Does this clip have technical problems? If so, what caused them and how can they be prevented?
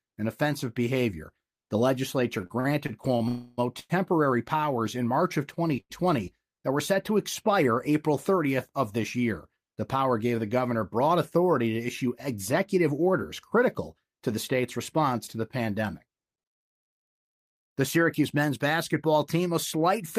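Yes. From 2.41 to 3.92 s, packets repeatedly arrived late and the jitter buffer kept emptying, producing repeated stalls (stutter): six gaps filled with continued sound, 246 ms in all, the longest 101 ms, so the speech drags and stutters. A larger or adaptive jitter buffer and a steadier network path with less congestion would prevent this.

Within that stretch, from 3.28 to 3.59 s, 296 ms of continued sound that fades replaces new audio before the speech resumes where it stopped, with nothing lost. This call audio freeze was likely caused by packets being held up long enough to drain the buffer. Prioritising voice traffic with QoS marking would keep such holdups short.

At 5.80 to 5.91 s, one packet missed its playout time, causing a short stall from a late packet: the last sound is stretched by 94 ms with a slight buzz or dip before continuing. A small increase in buffer headroom would absorb a single late packet.

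From 12.89 to 14.37 s, just before "state's response to the", the buffer held excess audio and the receiver trimmed around 70 ms in short pitch-period pieces. This jitter buffer speed-up makes the speech run 5% faster at unchanged pitch and sound hurried. Smoother packet delivery, avoiding bursts of delayed packets arriving together, would remove the need for this catch-up.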